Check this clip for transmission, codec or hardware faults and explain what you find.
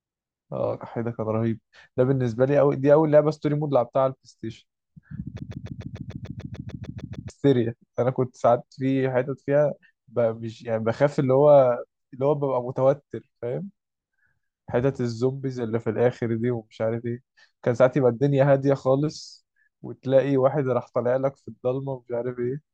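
One fault stands out: a broken-record loop. From 5.39 to 7.30 s, a 147 ms fragment of speech repeats exactly 13 times back to back, producing a rapid mechanical stutter, and the speech that belonged in that stretch is lost. A stalled player or stream likely kept resending the last fragment it held. On a waveform, identical blocks tile evenly across the span. On a spectrogram, the same pattern recurs every 147 ms.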